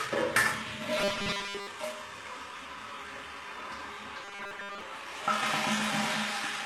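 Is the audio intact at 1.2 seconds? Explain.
No. From 0.99 to 1.67 s, the sound turns into a rigid, metallic buzz at 200 Hz. It still loosely follows the underlying sound. The likely cause is robotic sound from repeated short buffers. New audio stops arriving in time, so the player keeps looping the last 5 ms of data. That loop imposes the fixed 200 Hz pitch. Most of the real audio in this span, roughly two thirds or more, is skipped and never heard.

HE-AAC compression also affects this moment, as it does the whole clip. The treble that remains sounds gritty and metallic rather than natural. This is likely caused by HE-AAC coding at a low bitrate, which fits about 16 kbps. The codec keeps only the lower spectrum and rebuilds the highs by copying lower bands upward. The copied harmonics do not match the original, and the damage is plainly audible.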